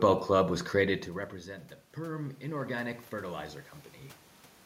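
Automatic gain rising runs from 1.46 to 3.51 s. When the input dropped by about 17 dB, after the talker moved near one second, the gain control slowly raised its gain by about 8 dB, so the speech and room noise swell together.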